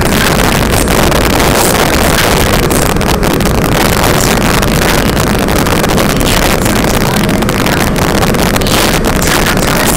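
Integer overflow runs through the whole clip. The level is pushed about 8 dB past the top of the integer range. Nothing limits it there. Each sample that goes over wraps around to the opposite sign instead of stopping at full scale. Roughly seven percent of samples cross that line. Every loud peak therefore snaps across the full range in a single step. The result is a series of violent, harsh cracks on the louder moments. They are far sharper than ordinary clipping.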